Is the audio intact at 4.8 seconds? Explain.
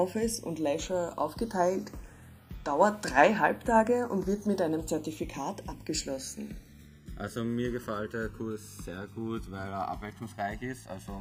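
No. At 4.8 seconds the sound carries channels drifting apart, a fault present throughout the clip. The two channels run on clocks that disagree by roughly 150 parts per million. The delay between them keeps growing, reaching around a millisecond by the end. At this moment it is somewhat under that. When the channels are summed, the comb-filter notches glide slowly across the spectrum. The result is a slow, sweeping flanging colour.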